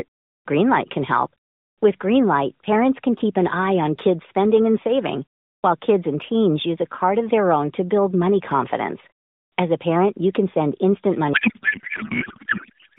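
Right up to about 11.34 s the speech comes through a narrowband AMR mobile link, band-limited to roughly 150 Hz to 3.7 kHz with only light codec colouring. From 11.34 s to the end it falls apart into a codec payload misread: the speech turns into garbled noise and warble that barely tracks it. That's the sound of octet-aligned AMR frames being unpacked as bandwidth-efficient, so every field lands in the wrong place and the decoder synthesises nonsense from plausible-looking frames.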